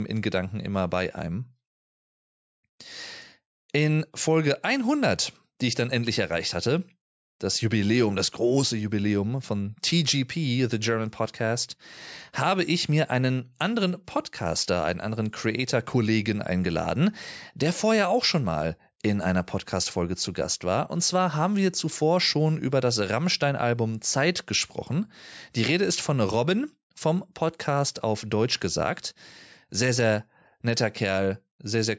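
No technical faults can be heard anywhere in this speech. The sound has come through a call's microphone processing, which trims away the lowest bass and leaves nothing above 8 kHz.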